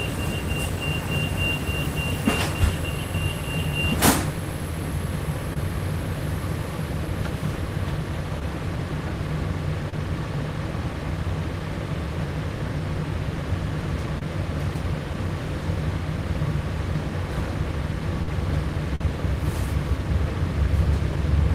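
Short concealed packet loss strikes at 5.53–5.57 s, 8.39–8.42 s, 9.90–9.93 s, 11.6 s and 14.19–14.22 s. Each time, between 10 and 30 ms of audio never arrived, and the receiver filled the hole by extending the preceding sound. This is heard as a brief smear or wobble. On a spectrogram, each appears as a short patch of stretched, blurred texture.

At 18.22–18.28 s, a burst of packet loss drops about 50 ms. The concealment holds the last sound as a fading buzz or hiss before the audio jumps ahead. On the waveform, the envelope decays and then restarts abruptly.

One more short concealed packet loss at 18.95–19.01 s covers about 50 ms, leaving a brief smear and a blurred column on the spectrogram.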